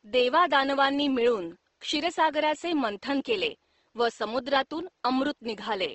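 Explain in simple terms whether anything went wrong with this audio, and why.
Throughout the speech, the sound has a rough, grainy, slightly hissy texture, as if the voice were made of sand rather than smooth tone. That points to Opus compression, likely squeezed hard. Opus keeps the overall loudness of each frequency range but fills in missing detail with borrowed or noise-like sound. That is why it sounds grainy instead of the watery, swirling effect of MP3-style damage. The faint room noise underneath is simply the recording space.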